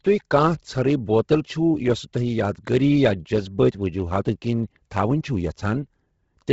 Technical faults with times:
0.00-6.53 Bluetooth LC3 compression

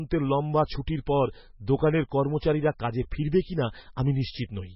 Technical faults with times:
0.00-4.75 MP3 compression

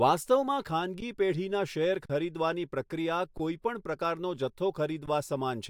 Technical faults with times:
1.00 underrun with held sample
2.06-2.10 underrun with held sample
3.38 underrun with held sample
5.06 underrun with held sample

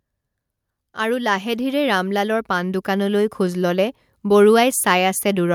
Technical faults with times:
0.94-1.76 automatic gain rising
2.47-3.71 automatic gain rising

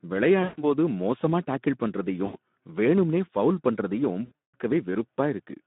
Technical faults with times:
0.00-5.66 Speex codec
0.43-0.64 VoIP packet loss concealed by the speech codec
2.25-2.36 VoIP packet loss concealed by the speech codec
4.25-4.55 VoIP packet loss concealed by the speech codec

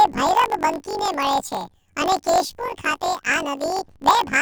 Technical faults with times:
0.00-4.42 planar audio read as interleaved

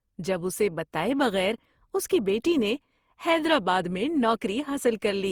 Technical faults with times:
0.00-5.32 generation loss

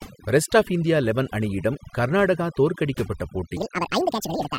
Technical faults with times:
0.00-4.58 overdone noise removal
3.57-4.58 section at the wrong speed

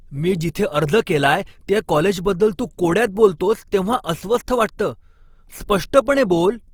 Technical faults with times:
0.00-6.74 Opus compression

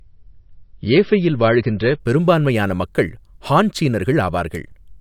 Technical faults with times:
0.00-2.00 adaptive stream starting at a low bitrate

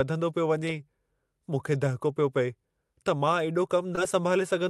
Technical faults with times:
3.95-3.99 short concealed packet loss

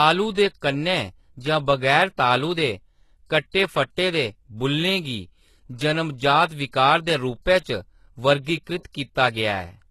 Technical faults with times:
0.00-9.90 HE-AAC compression

